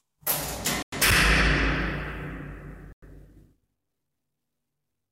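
At 0.82 to 0.92 s and 2.92 to 3.02 s, a gap between chunks cuts the sound. Each 100 ms silence falls at a join between 2-second chunks.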